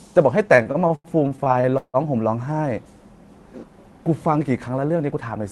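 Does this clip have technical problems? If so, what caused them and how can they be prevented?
Yes. Between 0.55 and 1.97 s the speech has repeated stalls (stutter). Packets arrived late or more slowly than they were played, so the jitter buffer kept running dry, and the receiver stretched the last sound to bridge each wait. Thirteen such gaps fill about a third of that stretch, roughly half a second in total, with the longest at 163 ms, where the held sound fades. Nothing is lost, but the speech drags and hiccups. A steadier network path, or a jitter buffer that adapts its target depth sooner to rising delay, would prevent it.

From 4.73 to 5.33 s there is a jitter buffer speed-up. The buffer held more audio than its target, so the receiver cut out short pitch-period-length slices one after another, about 70 ms in all, to bring the delay back down. The speech therefore plays at 112% of its normal rate with unchanged pitch and sounds hurried. 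Lower delay jitter, or a gentler catch-up rate spread over a longer span, would prevent it.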